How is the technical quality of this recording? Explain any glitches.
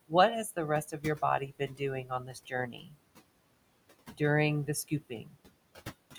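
The technical quality is held back by noise suppression, which leaves processing artefacts across the whole recording and cuts into the speech in four places.

Noise suppressor artifacts are present throughout. The suppressor pulls down bands it judges to be steady noise by about 21 dB, frame by frame. The room noise, about 17 dB below the speech, therefore drops away in pauses and swells back under speech.

Speech cut by the noise suppressor occurs at 0.85–1.22 s (just after "has the"), 1.4–1.81 s, 2.03–2.97 s and 4.88–5.35 s. The suppressor mistook quieter speech for noise and lowered it by about 12 to 16 dB, so parts of the speech sound swallowed or faint. The longest stretch is the third, where nearly three quarters of a second is affected.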